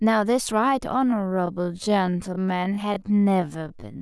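From 1.02 s to the end, the speech slows abruptly to about 0.52 times its pace with pitch unchanged, sounding dragged. This is a time-stretched section, likely from software repeating short pieces. Spectrogram harmonics stay level but syllables stretch wider, with repeating grain patterns.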